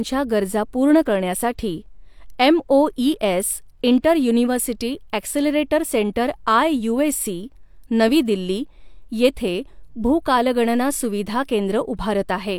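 No technical faults are audible.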